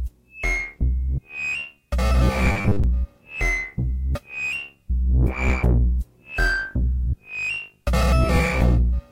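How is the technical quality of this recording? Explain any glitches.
There's one glitch: robotic sound from repeated short buffers, 2.52 to 2.84 s. Most of that stretch is a rigid 100 Hz buzz, likely from a 10 ms chunk being looped while real audio is skipped.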